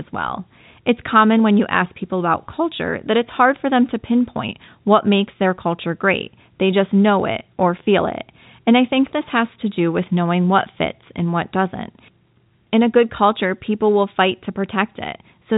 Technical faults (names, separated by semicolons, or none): none